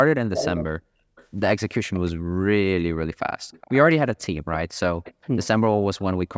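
Right from 0.34 to 0.64 s there's a delayed copy of the speech trailing about 0.38 s behind, and loud too, only about 5 dB under the talker. That's an echo leak, most likely a speakerphone whose echo canceller let its own playback slip back into the mic. Fainter scraps follow at 1.16 to 1.26 s (about 30 dB down) and 1.94 to 2.11 s (about 25 dB down).

Then at 2.23 to 2.32 s the room sound briefly drops out, by as much as about 36 dB for around 70 ms. That's background gated by the echo canceller, which clamped the mic while the far end was playing and then released it.

The echo leak comes back at 3.51 to 3.9 s, 5.04 to 5.14 s and 5.41 to 5.47 s, each about 20 to 25 dB down. The delay creeps from roughly 0.39 to 0.40 s.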